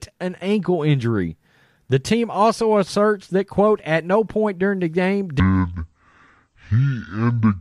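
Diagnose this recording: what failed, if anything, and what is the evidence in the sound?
From 5.40 s to 7.61 s the speech is a section at the wrong speed, running at 0.557 times normal, so pitch drops about ten semitones as pacing slows. The likely cause is playback clocking that stretch at the wrong sample rate. A pitch shifter would keep the timing.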